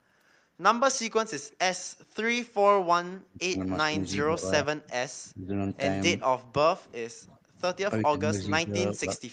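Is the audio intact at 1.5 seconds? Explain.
No. From 1.51 to 1.56 s there is an echo leak: a very faint, delayed copy of the speech, sitting roughly 35 dB below the direct voice and trailing it by 379 ms. It is a brief scrap rather than a sustained echo. The likely cause is a far end playing the call over a loudspeaker, where the echo canceller failed to fully suppress what its microphone picked up and returned that residue down the line.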